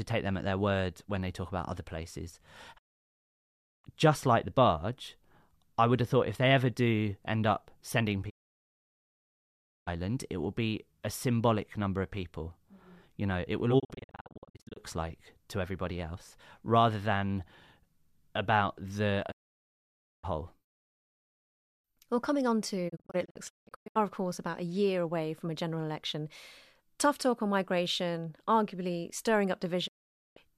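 Speech with six digital broadcast dropouts, where the receiver mutes after roughly 20 ms fades because frames are lost or fail checks: 2.77–3.86 s ("talk about other places" to "just like the barge"), 8.29–9.89 s, 13.78–14.78 s (scattered short holes), 19.30–20.25 s after "about the", 22.88–23.97 s (scattered, before "of course about"), and 29.86–30.38 s. They appear as blank vertical columns on a spectrogram and flat-lined gaps in the waveform.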